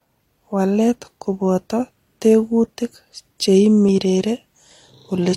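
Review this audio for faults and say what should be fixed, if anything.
At 3.89 to 3.92 s the speech has an overlap between stream segments: about 30 ms is trimmed at a segment join, likely on a 1-second grid, producing a tiny skip. Prevent it by aligning segment timestamps so adjacent segments abut exactly.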